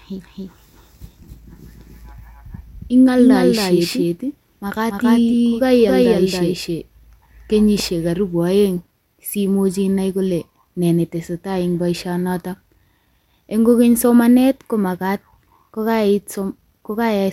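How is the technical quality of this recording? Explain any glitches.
The main problem is a doubled audio track over the first part of the speech, from the very start of the clip until it cuts off abruptly at 7.8 s. A second full copy of the speech trails the original by roughly 300 ms and sits at about the same level, so everything sounds like a distinct slapback echo. There's no decay or room tone on it, just a clean duplicate. Most likely it's a second, slower capture path or an edit leaving two copies out of step.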